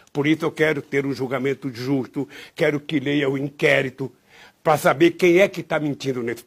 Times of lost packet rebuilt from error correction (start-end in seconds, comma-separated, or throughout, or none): none